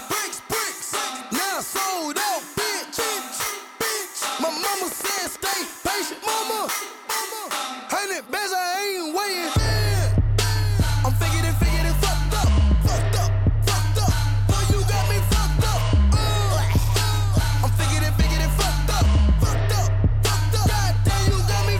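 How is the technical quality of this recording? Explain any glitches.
The recording has one clear glitch. From 4.39 to 5.63 s there is a train of clicks: around fifteen similar pulses at a steady 11.4 per second, peaking roughly 5 dB above the surrounding sound. Heard as regular ticking over the audio, the pulses most likely come from electrical interference or an interface briefly injecting spikes.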